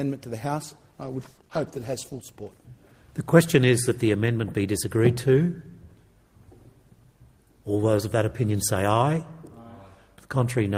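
From 1.04 to 2.31 s, a call bitrate drop makes the sound rough and muffled with lost highs, consistent with coding falling from around 32 kbps to 14 kbps.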